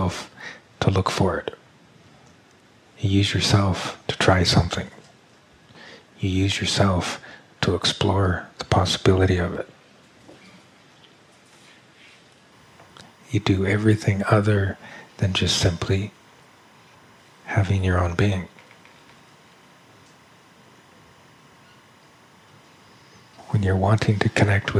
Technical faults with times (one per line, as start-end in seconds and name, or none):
12.52-24.80 timecode bleed